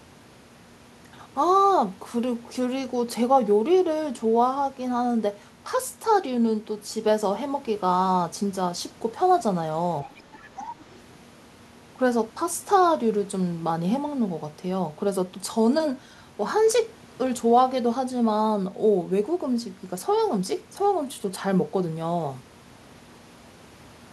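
At 10.04 s the talker's speech dips by roughly 10 dB for about a tenth of a second, recovering by 10.14 s. This is speech suppressed in double talk, likely caused by the echo canceller hearing both sides at once and attenuating the whole microphone signal. The level sags but the speech doesn't drop to silence, and it coincides with the other voice arriving. A network dropout or packet loss would instead cut abruptly or leave a gap, with no link to anyone else talking.

Starting at the same moment, 10.04 s, and running to 10.39 s, the other side's voice leaking through can be heard faintly, around 20 dB below the talker. It returns from 10.56 to 10.67 s, somewhat stronger at about 15 dB down. The likely cause is loudspeaker playback reaching the microphone and being only partly removed by the echo canceller. Unlike room reverberation, which smears the talker's own sound, this is a separate voice arriving in short fragments.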